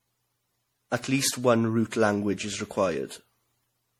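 Generation loss runs through the whole clip: the speech sounds swirly, hollow and smeared, with blurred consonant attacks. The likely cause is lossy MP3 coding repeated about seven times, each pass requantising on a shifted frame grid so noise and spectral gaps accumulate, consistent with 64 kbit/s.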